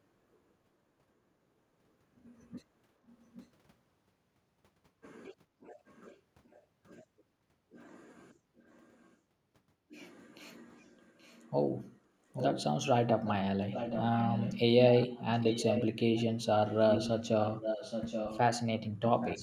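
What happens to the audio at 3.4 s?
A faint, delayed copy of the speech, about 825 ms late, sneaks in from 3.35 to 3.48 s: an echo leak, likely from a far-end loudspeaker the echo canceller didn't fully suppress.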